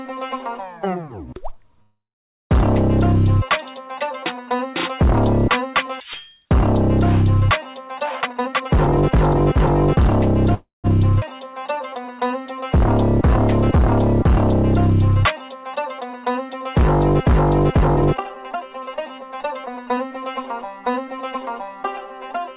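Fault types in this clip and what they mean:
call audio freeze: The sound stops and a fading fill takes its place, then resumes where it left off. This likely comes from held-up packets emptying the jitter buffer. At 1.82 s the gap lasts 0.68 s, mostly silent. At 10.54 s it lasts 0.29 s.
jitter buffer speed-up: Short pitch-period pieces are cut out repeatedly to shrink a backlog. Pitch stays the same but the pace rushes. From 8.20 to 9.97 s it runs at 130%, dropping about half a second. From 17.71 to 21.86 s it runs at 110%.
skip ahead: A short stretch of sound is dropped while later audio is already waiting. Playback jumps forward at 11.20 s, with only an 18 ms join. Roughly a tenth of a second is missing, and the two sides meet almost directly.
jitter buffer slow-down: Single pitch periods or bits of pause are repeated to rebuild the buffer. The pitch holds steady while the pace drags slightly. 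From 11.44 to 12.84 s the audio plays at 95%, adding 77 ms of stretched sound.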